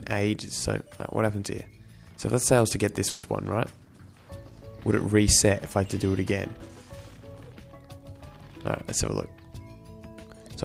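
At 3.09 to 3.25 s a call audio freeze stretches the last sound into a fading buzz or hiss for 140 ms, then the audio resumes intact but 140 ms later, likely from delayed packets draining the jitter buffer. A spectrogram shows smeared, repeating bands decaying in level.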